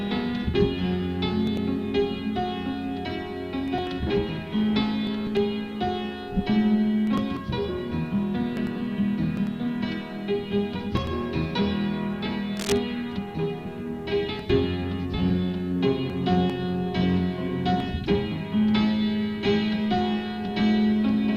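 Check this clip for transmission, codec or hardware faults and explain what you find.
One hardware fault is audible: a short patch of cable scratch noise from 12.55 to 12.78 s. For about a quarter of a second, a rough scratching, rustling layer sits on top of the sound at roughly 10 dB below it. This likely comes from a worn cable, connector or control being moved, so its contact resistance fluctuates quickly and injects irregular noise bursts. A spectrogram would show a cluster of ragged, broadband vertical streaks, and the waveform would show dense, uneven spikes over that stretch.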